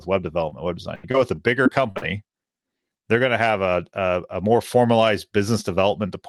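Short concealed packet loss at 0.49 to 0.53 s: about 20 ms of speech did not arrive in time for the decoder, and the receiver filled the gap by extending the last sound it had, then blended back into the real signal. The patch is very brief, so it comes through as a small smear or wobble in the speech, and part of a short sound at that point can go missing.

Repeated packet loss (robotic sound) from 0.95 to 2.04 s: the losses come back six times in this stretch, leaving roughly 220 ms missing in total, with the longest gap about 80 ms. Each hole is filled by continuing the preceding sound, and the next one arrives before the speech has settled. About a fifth of the span is concealed, so the speech sounds choppy, with pieces dropping out. The band limit near 12 kHz heard across the clip is consistent with a call codec such as Opus.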